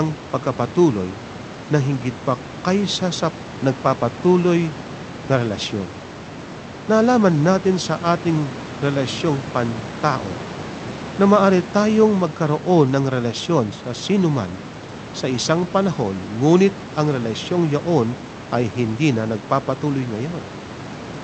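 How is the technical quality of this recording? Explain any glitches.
No technical glitches are audible.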